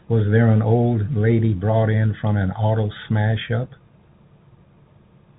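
No faults found in the speech; the narrow band topping out near 4 kHz is simply the ordinary sound of G.711 mu-law telephone coding, consistent with a 64 kbps line.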